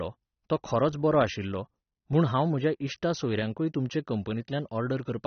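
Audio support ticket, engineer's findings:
Likely AAC compression at a low bitrate, consistent with about 27.5 kbps: nothing above 6.3 kHz throughout, plainly audible codec smearing, dull speech.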